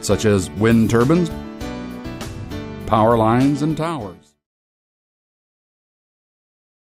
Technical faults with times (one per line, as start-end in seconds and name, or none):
none